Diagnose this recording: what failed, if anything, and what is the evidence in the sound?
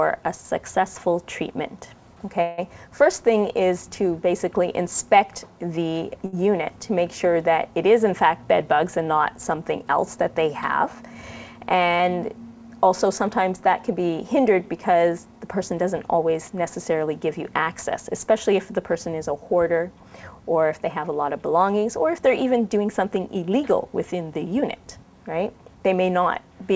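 At the network and buffer stage, the jitter buffer most likely ran dry while packets were held up in transit, a call audio freeze. From 2.42 to 2.60 s the last sound is carried on as a fading buzz for about 159 ms. The audio then resumes exactly where it stopped, so nothing is lost. Instead, a gap has been inserted and the remaining audio arrives that much later.

A short stall from a late packet occurs between 6.26 and 6.44 s, again at the jitter buffer. One packet was not there when it was due, so the receiver stretched the preceding sound by about 68 ms until the packet turned up, then carried on from the same point. You hear a sound held slightly too long, with a faint buzz or dip, and no content missing.

The jitter buffer speed-up happens three times, with the buffer trimming excess queued audio to reduce delay. At 11.15 to 11.76 s it runs about 9% fast, at 15.02 to 15.40 s about 14%, and at 22.59 to 23.52 s about 10%. 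Each time, short pitch-period pieces were cut repeatedly, removing roughly 70, 70 and 100 ms. The pitch stays put but the pace sounds hurried. Through all of this, the G.722 call path, with nothing above 8 kHz, is in place.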